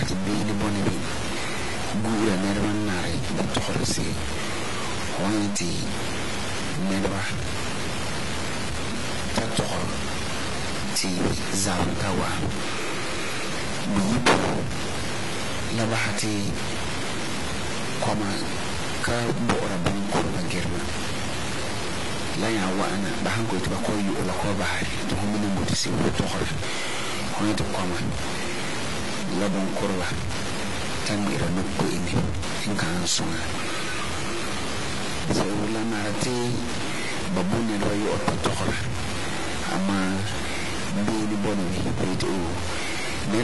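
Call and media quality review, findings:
Stuck bit, likely a broken data line or converter output. Distortion across the whole speech clip, with noise filling the pauses between phrases.

AAC compression, likely a low-bitrate AAC-LC encode, which fits around 32 kbps. Nothing above 11.5 kHz throughout; dull, smeared sound with plainly audible warbling and fizzy sibilants.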